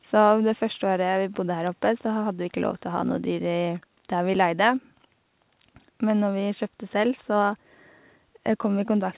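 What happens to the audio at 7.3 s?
Nothing goes wrong at 7.3 s: the speech carries on intact through the call path, band-limited with nothing above 4 kHz as the G.711 mu-law coding leaves it, with no dropout, glitch or distortion at that moment.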